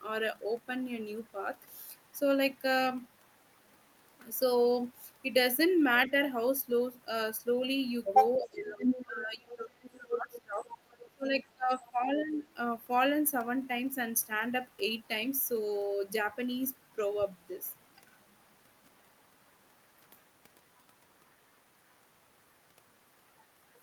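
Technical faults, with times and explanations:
6.07–6.11 s, 8.4–10.61 s, 11.08–12.42 s: speech suppressed in double talk. The speech dips, by a few dB at first and then by roughly 20–25 dB, likely because the echo canceller turned down both sides during simultaneous talk.
8.45–8.49 s, 8.81–9.05 s, 9.52–11.1 s, 11.81–11.9 s: other side's voice leaking through. A second voice comes through in scraps and one longer stretch, from faint to as loud as the main speech, likely from loudspeaker echo the canceller did not remove.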